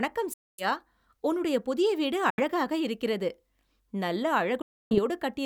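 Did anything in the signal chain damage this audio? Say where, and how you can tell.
Yes. Bluetooth dropouts cut the speech three times: 0.33 to 0.66 s, 2.30 to 2.41 s just after "உன்னுடைய புதிய வீடு", and 4.62 to 4.99 s. Each gap is flat silence, and the speech picks up further along rather than where it stopped. The likely stage is the wireless playback link. Packets arrived too late at the headphones and were discarded, so the missing audio was skipped rather than delayed.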